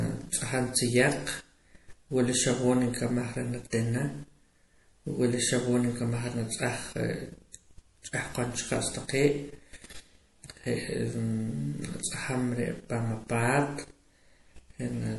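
All the way through, the speech has a watery, swirly edge with nothing above 11.5 kHz, likely MP3 compression at a low bitrate, around 48 kbps.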